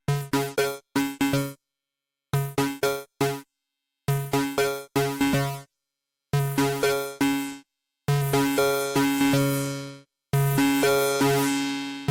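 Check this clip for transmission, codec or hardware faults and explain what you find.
No faults turn up anywhere in this recording. Listening through the whole sound, nothing points to a problem in how it was transmitted, encoded or captured.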